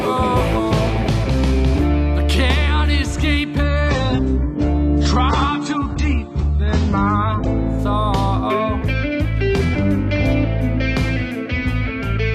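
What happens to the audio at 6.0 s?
At 6.0 s the audio is inside an adaptive stream at a lower bitrate, running from 3.63 to 7.63 s. A slowed connection made the player switch abruptly, with no gap, to a leaner encoding, which fits a drop from 96 to 24 kbit/s. The treble vanishes above 8.3 kHz and codec artefacts thicken.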